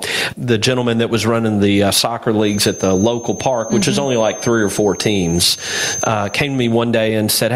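The speech in this clip sounds squashed throughout, with the gain swinging by something like 20 dB as it clamps down under each louder syllable. That is gain pumping, likely from an input gain set far too high and a fast limiter clamping down on each peak. From 2.37 s to 6.78 s a thin, steady whistle near 6.3 kHz sits about 20 dB below the speech, swelling and fading slowly in level. This feedback whistle is likely a loudspeaker-to-microphone loop held just at the edge of feedback, so it rings without running away.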